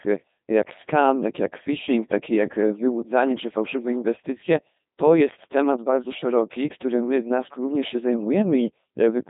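Throughout, the speech carries heavy Codec 2 vocoder damage: a robotic, buzzy voice resynthesised from sine waves, consistent with a rate near 2.4 kbit/s. A spectrogram shows clean, regular harmonic stripes inside 150 Hz to 3.7 kHz and nothing above 3.8 kHz.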